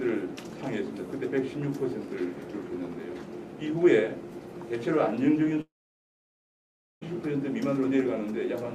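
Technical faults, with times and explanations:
5.61 to 7.03 s, long network dropout: the sound smears into a short fading buzz, then about 1.3 s of silence, and comes back at 7.03 s with roughly 1.4 s missing, likely because packets stopped arriving and the receiver could only stretch the last bit.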